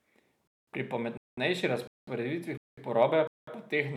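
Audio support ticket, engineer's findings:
Gap between chunks, speech: five hard-edged silent holes, each 200 ms, at 0.47, 1.17, 1.87, 2.57 and 3.27 s, one after every 0.5 s of audio. Before "porabe pa teh" twice, then before "pa teh". Nothing lost, just pushed later at each join. Suspect playback or chunk reassembly inserting padding or late-starting each chunk. Waveform: flat-line segments with abrupt edges. Spectrogram: evenly spaced empty vertical bands.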